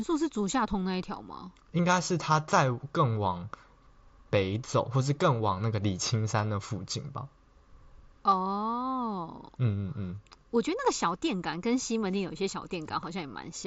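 No technical faults turn up anywhere in the speech. The audio carries the character of a Bluetooth mSBC headset link, with the sound topping out around 8 kHz and a faint grain on louder passages.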